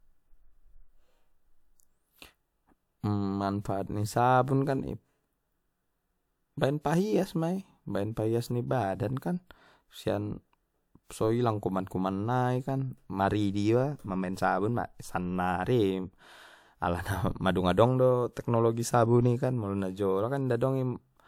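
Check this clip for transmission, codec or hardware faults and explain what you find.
The clip has a codec fault: pre-echo, twice, at 3.61 to 3.65 s (about 40 ms) and 6.58 to 6.61 s (about 29 ms). A transform codec spreads its quantisation noise over a whole block, so noise sized for a sharp onset also fills the quiet gap just ahead of it. The result is a brief hiss before each attack, which sounds softened. Unlike room echo or reverb, the smear comes before the attack rather than trailing after it.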